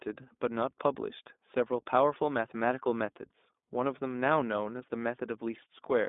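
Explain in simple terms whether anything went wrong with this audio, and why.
Throughout, the speech passes through the iLBC codec. Everything above about 3.8 kHz is gone, and a rough, synthetic grain, unlike a simple muffled phone line, shows each 20 ms piece coded separately.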